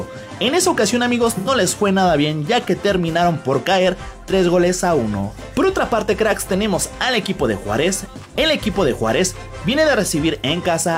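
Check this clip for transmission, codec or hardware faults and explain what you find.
One transmission fault is audible: AAC frame loss with concealment from 1.37 to 1.49 s. About 85 ms of coded audio, which fits two lost AAC frames, was missing. The decoder rebuilt the gap from the preceding spectrum, leaving a brief smeared, noisy, phasey patch.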